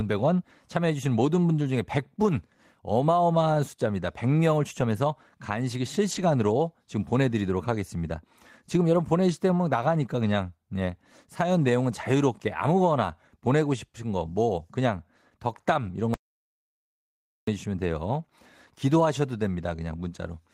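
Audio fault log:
6.11–6.21 s and 15.57–15.59 s, lost packet rebuilt from error correction: the speech keeps going with no gap, but a stretch of about 60 ms, then a second of about 20 ms, turns briefly rougher and noisier. The longer patch fits roughly three separate 20 ms packets and the shorter one a single packet, each replayed from the low-bitrate copy carried in the following packet. On a spectrogram the harmonic detail smears into grainy noise for that instant. The waveform shows no break.
16.14–17.47 s, audio dropout to silence: the speech cuts off mid-flow and returns about 1.33 s later, with nothing audible in between, not even room tone, so whatever was said then is lost. The likely cause is the input being cut, for instance by a disconnected device, a failed link or a stray mute, while recording carried on writing silence. The waveform goes flat, and the spectrogram shows a blank column.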